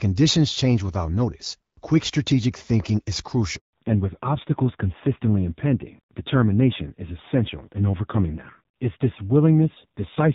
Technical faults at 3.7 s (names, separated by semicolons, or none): handover gap; fallback to narrowband